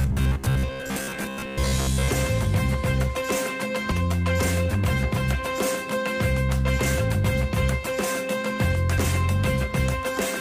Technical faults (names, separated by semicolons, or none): robotic sound from repeated short buffers; compressed frames skipped